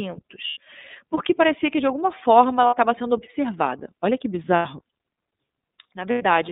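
Speech, squeezed through the iLBC codec the whole way, and you can hear it: the line is narrowband, roughly 200 Hz to 3.7 kHz, so there's no air above that, and the voice has that slightly rough, synthetic edge you get from a codec coding each 30 ms frame on its own, here at about 13.3 kbps. Then there are four patches of lost iLBC frames, at 0.47–0.57 s just before "porque parecia que de", at 2.67–2.74 s between "que de alguma forma" and "sendo observada", at 4.55–4.66 s and at 6.12–6.22 s. Each gap runs about 60 to 90 ms, which fits two or three dropped 30 ms frames, and the decoder papers over it by repeating the last pitch cycle with some noise mixed in, so you hear a short held, buzzy vowel instead of silence. Since the frames don't depend on each other, the voice snaps back right after each one.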